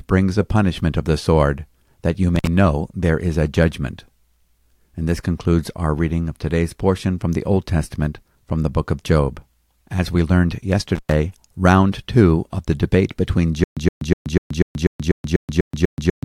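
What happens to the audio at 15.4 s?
At 15.4 s the speech is caught in a stutter with silent gaps, from 13.64 s to the end: a 119 ms fragment replays every 246 ms with 127 ms of digital silence between, likely a stalled stream retrying. Waveform: identical blocks alternating with flat lines.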